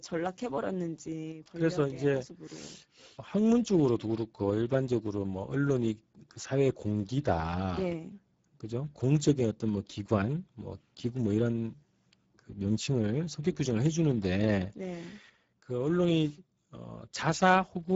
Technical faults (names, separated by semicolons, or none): Speex codec